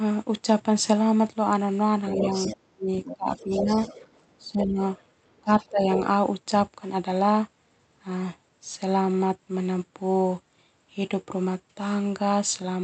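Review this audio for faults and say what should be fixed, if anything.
Residual loudspeaker echo, likely missed by the echo canceller, lets the other side's voice leak through about 10 dB below the talker at 2.06–2.56, 3.04–5.06 and 5.37–6.01 s. Tighter echo-path adaptation, or headphones at the talker's end, would prevent it.

Speech is suppressed in double talk: overlapping speech was likely taken for echo and turned down, by up to about 30 dB at 2.14–3.81 s and about 15 dB at 4.39–4.80 and 5.42–6.01 s. Better double-talk detection, so the suppressor backs off when both sides speak, would prevent it.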